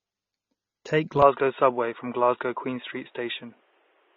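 AAC compression, likely, runs through the whole recording: a low-bitrate AAC-LC encoder drops everything above 7 kHz and smears the speech, which fits roughly 24 kbps.

Input switched to a poorer device at 1.22 s, likely: with no gap, the speech narrows to nothing above 3.8 kHz, shifts level by several decibels, and gains faint new background noise.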